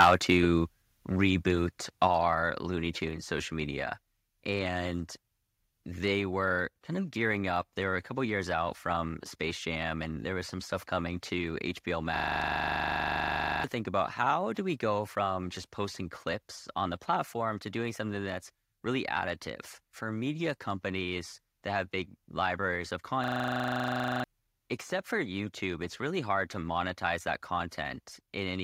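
Microphone overload, from 0.00 to 0.32 s: the opening speech is driven about 8 dB past full scale, and a small share of the samples are flattened at the converter's ceiling. Peaks whose tops are sheared off this way give the loudest moments a harsh, crackling grit. The likely cause is an input gain set too high at the microphone, so the signal reached the converter already beyond its limit.

Microphone volume stepped down, at 0.05, 1.05 and 2.07 s: the whole signal, speech and background together, drops abruptly in level three times. The first cut is about 2 dB and the next two about 4 dB each. They follow the overloaded start closely, and the likely explanation is the call software detecting clipping and pulling the device's input gain down in discrete jumps rather than fading it smoothly.

System hang loop, from 12.16 to 13.64 s and from 23.24 to 24.24 s: a 40 ms fragment of audio repeats exactly, 37 times in the first event and 25 in the second. 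At 25 repetitions per second the result is a rapid machine-gun stutter. The machine stalled while the sound hardware kept replaying the same buffer. About 1.5 s of real audio is lost before "think about how do". Roughly 1 s vanishes between "have big libraries of" and "except for".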